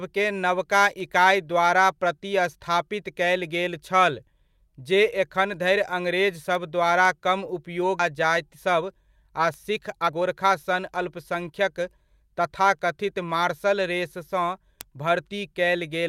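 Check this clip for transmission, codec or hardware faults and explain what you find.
Two transmission faults turn up here, both in the jitter-buffer and network side of things, and they come one right after the other.

At about 7.99 s there's a skip ahead. A chunk of the speech, roughly a second of it, never got played. Either it was lost in transit or the jitter buffer dumped it when it overflowed, with later audio already queued behind it. Nothing was filled in, so the speech on either side is butted straight together. You hear an abrupt jump forward with no gap or fade, and the talker seems to lurch mid-flow.

From 8.55 s to 12.40 s there's a jitter buffer speed-up. The buffer was holding more audio than it wanted, so the receiver kept snipping out tiny pieces a pitch period or so long, over and over, shaving off around 300 ms in total. Playback runs at about 108% of normal speed for those four seconds while the pitch stays put. 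The speech sounds a bit rushed and clipped along until it settles back to its normal pace.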